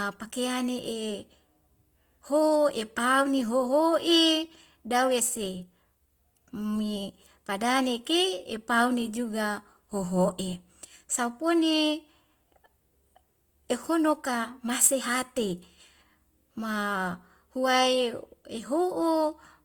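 Opus compression throughout this speech clip: plainly audible grainy, rough texture on tones, likely from Opus's music mode filling starved bands with noise, which fits roughly 24 kbps.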